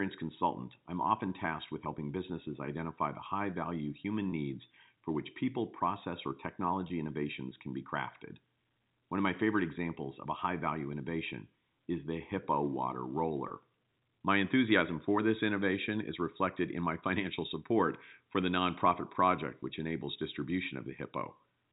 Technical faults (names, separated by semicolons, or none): packet loss with pitch repetition